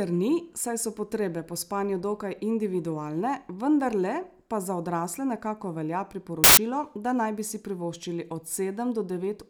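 Speech, with one fault: samples built from the wrong bytes, from 6.44 to 6.57 s. Here the reader assembles each sample from mismatched bytes, so the rapidly changing low bits land in the high-order position, and for about 130 ms the speech is replaced by loud, harsh broadband noise.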